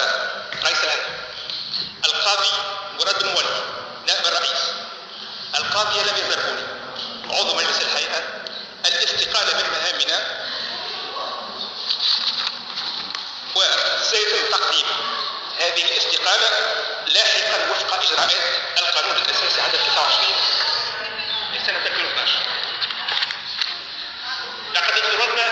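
Nothing is technically wrong with the audio, and no faults can be heard at any point in it.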